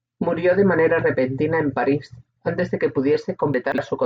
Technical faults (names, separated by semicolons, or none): chunks out of order